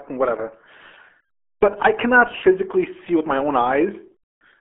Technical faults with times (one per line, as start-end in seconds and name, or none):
0.00-4.60 RealAudio 14.4 codec